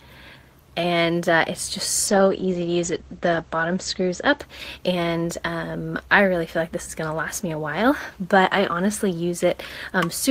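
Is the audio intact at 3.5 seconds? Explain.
No. A call bitrate drop runs from 2.09 to 5.25 s, so 3.5 s falls inside it. The call's bandwidth estimate fell and the Opus encoder was told to cut its bitrate from 32 to 12 kbps, staying at the lowest rate for 1.6 s. At that rate it codes more coarsely and narrows the audio band from 20 kHz to 8 kHz, so the sound turns rough or watery and loses its top end until the bitrate recovers.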